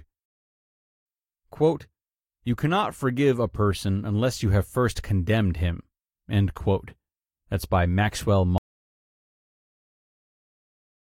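At 8.58 s the speech cuts off abruptly in an audio dropout to silence that lasts the final 2.44 s. The input was likely lost while silence kept being written, so no room tone remains: the waveform becomes a flat line and the spectrogram goes blank.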